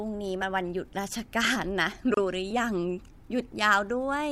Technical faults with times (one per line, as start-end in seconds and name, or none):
2.14-2.17 gap at a join of encoded pieces